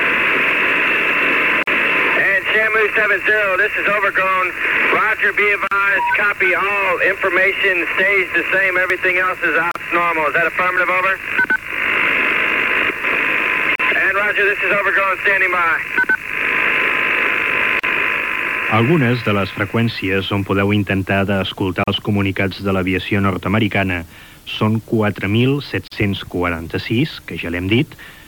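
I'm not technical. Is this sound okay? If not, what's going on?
No, not quite. There's a short dropout, a gap at a join of encoded pieces, at 1.63, 5.67, 9.71, 13.75, 17.79, 21.84 and 25.88 seconds, one every 4 seconds. Each is about 40 milliseconds long (the first slightly longer), with smeared edges, and then the sound picks up where it left off. It looks like the audio was saved in separate chunks and stuck together, with each chunk's built-in lead-in and padding left in at the seams.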